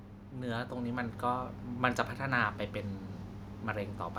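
From 0.35 s to 1.5 s the level climbs steadily by about 5 dB, which is automatic gain rising. The gain control judged the incoming speech too quiet and eased its gain upward over just over a second rather than stepping it. Because the whole input is scaled together, the speech and the background noise swell at the same rate, giving a slow fade-up of the entire sound rather than a change in the talker's delivery.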